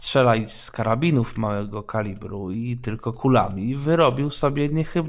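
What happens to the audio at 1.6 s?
Nothing goes wrong at 1.6 s; the speech plays through that moment intact, with no dropout, click or distortion to be heard.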